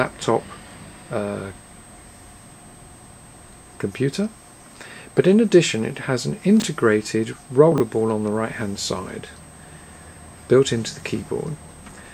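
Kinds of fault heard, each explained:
Chunks out of order, at 6.60 to 6.64 s and 7.72 to 7.80 s: 20 ms blocks of audio play in the wrong sequence, one block a single slot late and another three slots late, so nothing is lost but the hard joins cause brief jumbled stutters.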